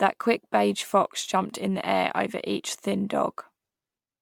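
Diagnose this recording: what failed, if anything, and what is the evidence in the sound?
Generation loss throughout, at the codec stage: swirly, smeared, hollow speech with blurred attacks and nothing above 19.9 kHz, pointing to MP3 near 128 kbit/s. The likely cause is around ten re-encodes, each quantising on a shifted frame grid, so noise and spectral holes pile up.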